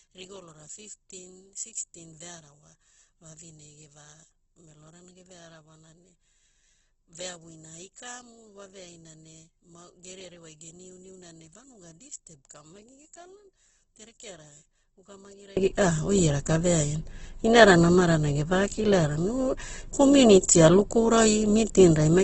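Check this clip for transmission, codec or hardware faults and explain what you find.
Two faults are present: codec damage through the whole clip, and a polarity problem in the first part.

From start to end the speech has Opus compression damage, likely at a low rate near 12 kbps in its music mode. Starved bands are filled with noise or folded copies, so tones turn grainy and rough, with nothing above 8.2 kHz. That graininess, not swirling holes, separates it from MP3.

From 0.0 to 15.57 s one channel is inverted, likely a reversed-polarity wire or stage. Summed to mono, the centred voice cancels and drops by about 25 dB, leaving a faint residue. Unlike a simple dropout, the sound returns at full strength once the polarity is restored.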